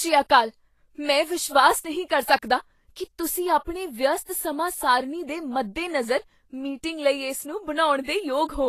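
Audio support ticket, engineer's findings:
Hissy, grainy speech throughout, treble roughened, consonant attacks smeared. Likely Vorbis compression: coarse residue quantisation turns fine high-band detail into noise; damage fits a bitrate near 33 kbps. Spectrogram: hard ceiling at 14.2 kHz, mottled, speckled treble beneath it.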